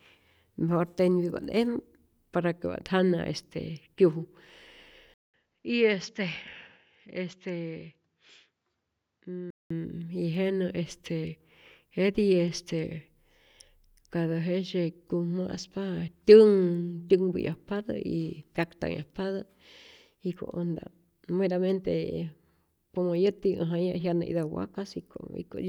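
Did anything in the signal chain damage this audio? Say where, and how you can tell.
Yes. At 5.14 s the speech cuts out for about 200 ms, then comes back duller and roughly 10 dB quieter, with nothing above 7.6 kHz and a faint new noise floor underneath. That holds until 9.70 s, when the full band returns. This is likely an input switched to a poorer device at the driver or device-selection stage: the system swapped to a narrower-band microphone or headset profile, with its own gain and self-noise, and then switched back.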